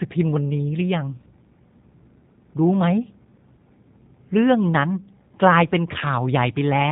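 From start to finish, the speech carries the sound of the G.729 codec. Nothing reaches above 3.8 kHz, so the top of the voice is cut away and sibilants lose their edge. The damage is plainly audible. The codec rebuilds each short frame from a vocal tract filter, a pitch guess and a handful of pulses. That leaves the voice rough and slightly synthetic. The sound points to a low-rate coder of about 8 kbit/s.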